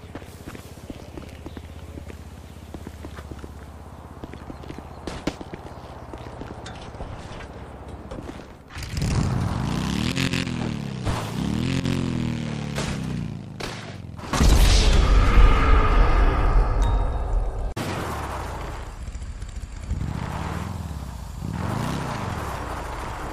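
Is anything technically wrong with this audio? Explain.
No technical faults are audible.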